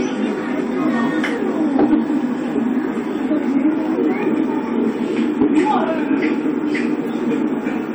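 Throughout, the sounds carry the coding artefacts of an earlier encoding; a low-bitrate file saved at a high bitrate is the likely cause, with residue fitting 64 kbit/s AAC under 256 kbit/s MP3. From 1.76 to 1.98 s and 5.41 to 6.32 s, hard clipping flattens peaks driven about 6 dB past full scale, adding crackle on the peaks.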